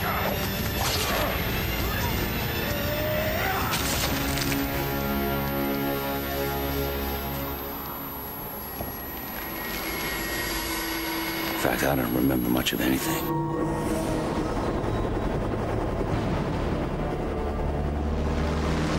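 From 0.0 to 13.29 s a switching supply whistle sits roughly 10 dB below the programme, a high tone wandering between about 11.3 and 14.0 kHz. A power supply's switching frequency has dropped into the audible range, and its pitch shifts with load.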